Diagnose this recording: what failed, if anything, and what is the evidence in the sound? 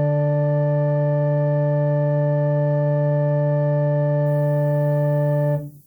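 The fault lies in sample-format conversion: low bit depth with noise shaping, from 4.26 s to the end at 5.87 s. A thin, steady hiss appears, rising sharply toward the top of the band, roughly 35 dB below the music. The section was requantised to 9 bits, and the rounding error was fed back and pushed up in frequency.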